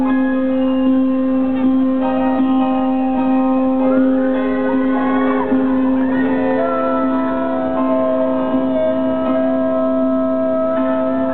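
From 4.85 to 6.75 s a train of clicks ticks over the sound at a steady 4.2 per second, about ten in all, each roughly as loud as the programme itself. The pulses keep the same shape and the same spacing, which separates them from random crackle or a lone glitch, and they sit on top of the audio rather than cutting it out. Their likely source is electrical interference or a faulty connection or power supply.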